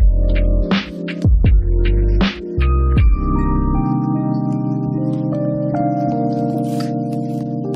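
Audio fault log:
6.54 s, compressed frames skipped. The audio jumps forward here, losing about 50 ms of material. Whole compressed frames never reached the output, either missing from the stream or rejected by the decoder as damaged. The gap equals a whole number of frame lengths, so the sound resumes later than it left off.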